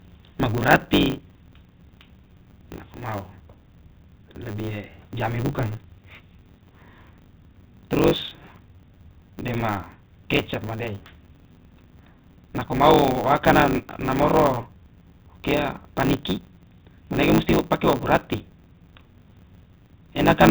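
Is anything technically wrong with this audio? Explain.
Yes. Throughout the speech there is a steady buzz at 100 Hz, and the talking runs about 1.16 times too fast while the timbre stays the same. This is a block size mismatch (truncated): one stage hands over longer blocks than the next one takes, and each block's tail is discarded, which fits blocks of about 512 samples. The repeated cut at the block boundary produces the buzz, and the missing slices shorten the timeline, so the speech is faster.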